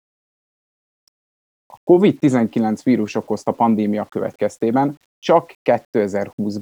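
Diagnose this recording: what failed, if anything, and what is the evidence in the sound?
Low bit depth without dither runs throughout the speech, heard as a grainy roughness that tracks the signal and sits around 45 dB below it. It is likely a sample-format conversion that rounded to 9 bits without dither, so the quantisation error follows the waveform and quiet passages turn gritty.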